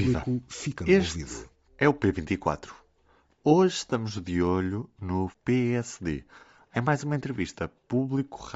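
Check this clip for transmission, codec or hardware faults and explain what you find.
Two faults are present: codec damage across the whole recording and one brief dropout.

Bluetooth LC3 compression, throughout: the speech carries a breathy, grainy edge, with the upper spectrum thinned out and replaced by a hiss-like texture. This is likely the LC3 codec of Bluetooth LE Audio working with 10 ms frames at a low rate, fitting about 32 kbps. At that rate much of the high-frequency detail is zeroed and refilled with noise, so sibilants and upper harmonics turn rough and plainly degraded.

Lost LE Audio frames, from 3.90 to 3.92 s: for about 20 ms, which fits two 10 ms frames, the transmitted audio goes missing. The decoder covers the gap by repeating the last received spectrum with randomised phase signs rather than playing silence. That concealment replaces the speech's harmonic structure with a short noisy smear, heard as a brief fuzzy blur in the speech before normal decoding resumes.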